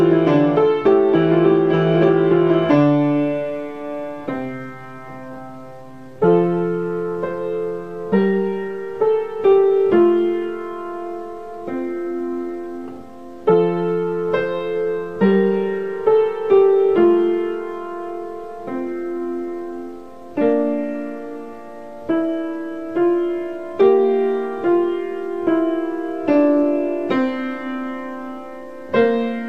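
No technical faults are audible anywhere in the recording.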